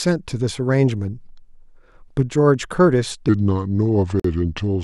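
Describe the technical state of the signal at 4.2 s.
At 4.2 s the speech sits inside a section at the wrong speed, running from 3.29 s to the end at 0.79 times normal rate. Pitch falls about four semitones and the pace slows together, the likely result of playback against a mismatched clock, unlike a pitch shift, which would keep the timing intact.

Within that stretch, from 4.20 to 4.24 s, a gap at a join of encoded pieces opens: about 48 ms of silence with smeared edges, left by encoder start delay and final-frame padding. The sound resumes exactly where it stopped, so nothing is lost, unlike a dropout, which skips material.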